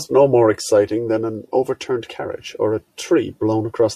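Nothing goes wrong anywhere in this bit of speech, so there's no technical fault to point out at any moment.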